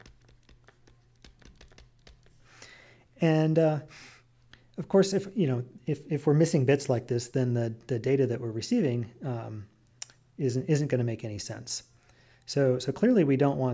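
Nothing in the audio stood out as a technical problem on listening.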